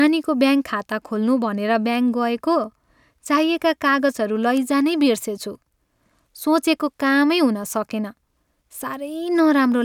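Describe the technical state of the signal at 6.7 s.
At 6.7 s the signal is intact, with no audible fault at that point.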